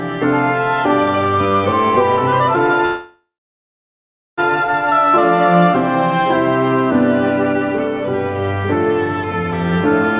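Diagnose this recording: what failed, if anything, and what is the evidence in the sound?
Call audio freeze from 2.86 to 4.4 s: the last sound smears out, falls silent, then resumes intact, so it's likely delayed network packets draining the jitter buffer.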